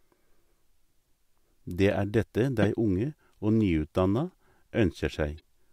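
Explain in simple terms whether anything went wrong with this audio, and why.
Damaged compressed data was decoded anyway: a corrupt frame decoded fault. Around 2.62 to 2.66 s, a couple of frames came through garbled and played as a loud, brief chirp, squeak, blip or burst of noise. A faint one follows at 5.38 to 5.42 s, where a few frames were hit.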